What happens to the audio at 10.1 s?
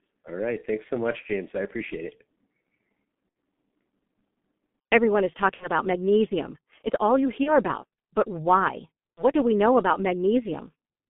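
At 10.1 s the speech is still passing through a G.723.1 codec, as it does for the whole clip. The coder rebuilds each 30 ms frame from a sparse, slowly updated model of the voice at a rate that fits about 6 kbit/s, inside a telephone band of about 150 Hz to 3.5 kHz. Here the damage is heavy: the speech sounds muffled and hoarse, and its consonants are smeared.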